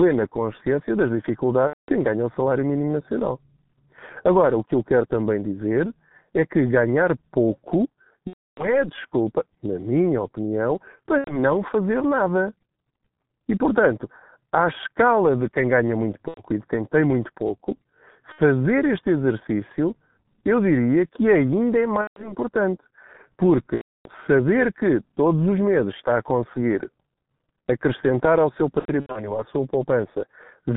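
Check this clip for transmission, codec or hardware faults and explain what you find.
Two faults are present: low-rate G.723.1 coding across the whole recording, and repeated VoIP packet loss concealed by the speech codec.

G.723.1 codec: the speech was squeezed to about 6.3 kbit/s in 30 ms frames, with the line band running roughly 150 Hz to 3.6 kHz. The slow-updating model and missing highs leave the speech heavily muffled and hoarse, with smeared consonants.

VoIP packet loss concealed by the speech codec occurs at 1.67–1.93 s, 8.27–8.87 s, 11.18–11.39 s (between "desculpa na minha opinião" and "fazer nada"), 16.28–16.41 s (between "de quem ganha muito" and "e de quem tem"), 18.32–18.40 s (between "quem tem muito pouco" and "este exercício eu diria"), 22.01–22.35 s, 23.76–24.08 s, and 28.79–29.40 s, where gaps are scattered across about 360 ms. Lost audio spans 60 to 300 ms, consistent with runs of 30 ms frames. 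The decoder reuses its last pitch and filter with falling gain, so speech becomes a buzzy, fading tone or coloured noise, staying weak briefly after recovery.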